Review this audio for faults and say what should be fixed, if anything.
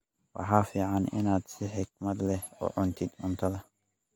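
The speech has a swirly, smeared, hollow quality across the whole clip, with softened consonant attacks and nothing above 19.3 kHz. That points to generation loss, likely from an AAC-LC stream around 96 kbit/s being re-encoded about three times, each pass stacking fresh quantisation noise. To prevent it, keep a lossless master and encode to AAC only once, at the very end.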